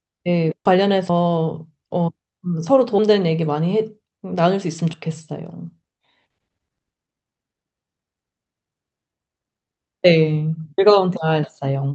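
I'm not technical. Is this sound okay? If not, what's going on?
No, the speech has three kinds of problem.

Skip ahead, at 0.65 to 0.76 s: the sound suddenly jumps forward, and about seven tenths of a second of speech is missing. A chunk was dropped, either on the way or at the call's receiving end when it had more audio waiting than it could hold, and playback carried on from later material. Both sides of the jump are stitched together almost directly, so there's no pause to warn you that anything went missing.

Jitter buffer speed-up, from 1.23 to 1.73 s: this half-second plays about 10% fast, so the talking sounds briefly hurried even though the pitch stays the same. Audio had piled up in the receiver's waiting area, so it trimmed away tiny slivers, around 70 ms in all, to catch up and cut the delay.

Audio missing between chunks, at 1.09, 4.93, 6.88 and 10.78 s: each of these points has a small skip, roughly a twentieth of a second of sound gone, with the pieces butted together and no silence between them. 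These are likely from the recording or processing handling the sound in separate blocks and losing a sliver each time one block ended and the next began. They can clip the edge of a word.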